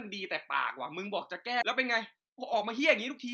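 Right around 1.61 to 1.63 s there's a skip ahead. A chunk of speech, something like seven tenths of a second, just isn't there, and playback jumps straight to later audio with no fill at all, so the two sides butt together. It sounds like the talker suddenly leapfrogged part of what they were saying. That's audio dropped in transit or tossed by an overflowing jitter buffer while newer packets were already queued.

Then from about 1.86 s to the end at 3.33 s you get a jitter buffer speed-up. The buffer was holding more than it wanted, so the receiver kept snipping out tiny pitch-period-sized slices to catch up, around a fifth of a second in total. Speech runs at roughly 113% speed with the pitch unchanged, so it comes across as rushed rather than chipmunky. Through all of this the call codec's usual coding texture is audible, with the top end rolled off above 8 kHz, which fits Opus in wideband mode.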